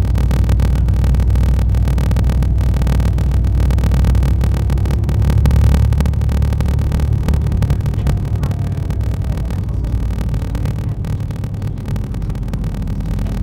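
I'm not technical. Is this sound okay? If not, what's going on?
No. From start to finish there is a steady low buzz, about 38 times a second, and everything plays about 11% slower than it should. This is a block size mismatch (padded). One stage hands over chunks of sound that are too short, and the gap in each chunk is filled with silence. The chunks handed over are 1024 samples long. Unlike simply playing audio too slowly, the character of the sound stays the same, and the tiny regular silences cause the buzz.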